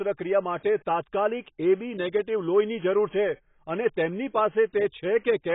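From start to finish, the speech has nothing above 3.8 kHz and sounds dull, smeared and watery, with a fizzy, warbling edge on sibilants and held vowels. This heavy damage is likely AAC compression, consistent with AAC-LC at a very low bitrate around 16 kbps.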